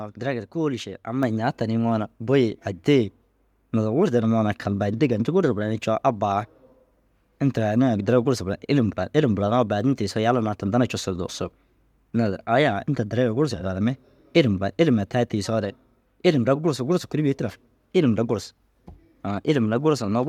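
At 1.23 s the microphone volume steps up: the call software judged the input too quiet and raised the device's input level in a single jump of about 5 dB. Because the change happens at the microphone rather than on the voice alone, the speech and the background noise both get louder at the same instant. On a waveform the envelope widens abruptly at that point. On a spectrogram every frequency band brightens together along one vertical edge.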